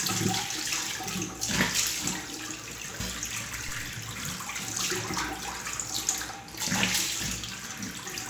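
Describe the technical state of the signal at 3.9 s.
At 3.9 s the signal is inside a phantom power thump, running from 3.69 to 4.01 s. A supply on the live input was switched, and that sudden voltage step passed through the coupling capacitors into the audio path. The result is a deep, low-frequency thump layered over the sound. It peaks at about -31 dBFS. Its energy falls away quickly, with a decay of about 73 ms.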